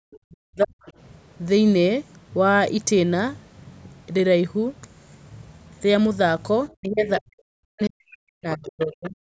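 A speech recording with two episodes of speech suppressed in double talk, from 0 to 0.81 s and from 6.78 to 9.15 s. The talker's level drops in chunks, at worst by about 40 dB, for roughly 0.7 s and 2 s in total. This is likely an echo canceller that could not tell the near talker from loudspeaker echo and attenuated both. On a waveform the envelope shows abrupt notches and gaps. A spectrogram shows the energy collapsing across the band, with the high end thinning. The other side's voice leaking through is audible as scraps at 0.11–0.17, 0.84–0.92, 6.69–6.74, 7.06–7.21, 7.83–7.89 and 8.65–9.1 s. These sit roughly 15 to 35 dB below the speech, the loudest around 7.1 s and 8.7 s. The likely cause is residual far-end echo from the loudspeaker that the canceller left in the microphone signal. On a spectrogram these appear as harmonic traces with their own pitch contour, lying inside or beside the suppressed stretches.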